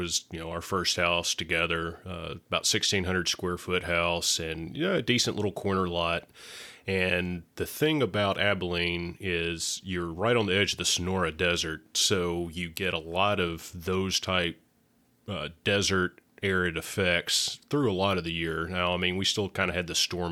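No technical faults can be heard anywhere in the speech.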